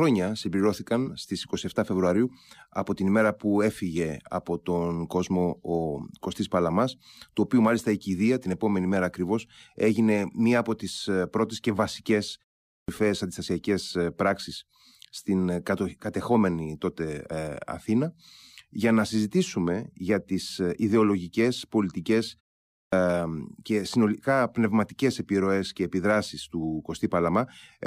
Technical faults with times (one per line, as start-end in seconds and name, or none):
12.74-12.88 clipped start after a pause
17.31 compressed frames skipped
22.78-22.92 clipped start after a pause